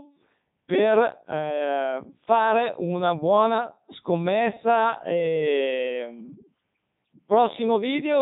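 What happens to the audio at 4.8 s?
At 4.8 s the speech is passing through the Codec 2 vocoder, which affects the whole clip rather than just that moment. The decoder rebuilds the voice from sine waves driven by pitch, voicing, energy and a coarse spectral shape, discarding the original waveform; the heavy damage fits Codec 2's 3.2 kbit/s mode. The result is a robotic, buzzy synthetic timbre with nothing above 3.8 kHz, so the speech sounds dull and mechanical.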